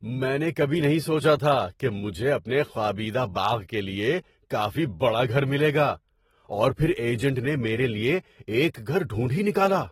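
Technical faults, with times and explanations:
Throughout: AAC compression. The speech sounds dull and smeared, with a warbling, fizzy texture on sibilants and held sounds, and nothing reaches above 16.6 kHz. This is likely AAC-LC coding near 28 kbps, where the encoder quantises each frame's frequency lines coarsely and drops or fills bands it cannot afford. A spectrogram shows a flat ceiling at 16.6 kHz, with patchy holes and blotches in the upper bands beneath it.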